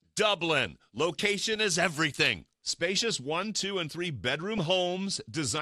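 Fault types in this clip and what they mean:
MP2 compression: The whole clip sounds dull and granular, with gurgling in the upper range. This is likely MPEG Layer II coding at a low rate, around 80 kbps.
DAB burbling: From 4.58 to 4.65 s, a brief burst of burbling appears. It fits a small fraction of bit errors slipping past error correction and corrupting a few audio frames.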